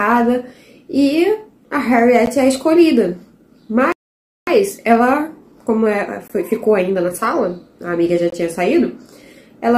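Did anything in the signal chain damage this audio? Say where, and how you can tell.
Yes. Playback-stage segment gaps appear at 2.26 s, 6.28–6.30 s and 8.30–8.32 s: hard-edged silent holes of about 12 to 22 ms, falling on 2-second boundaries, which fits 2-second stream segments whose time stamps don't meet. Unlike dropouts, nothing is missing. The sound resumes exactly where it paused.

A playback stall silences the output from 3.92 s to 4.47 s, cutting off mid-flow for about half a second. That is far longer than the segment gaps and has no regular spacing, pointing to a likely buffer underrun or blocked player thread.

Time-compressed catch-up follows the stall from 4.47 s to 7.49 s. The audio runs about 1.1 times fast while keeping its normal pitch, because small pieces are cut out and cross-faded. A plain resampling speed-up would instead raise the pitch.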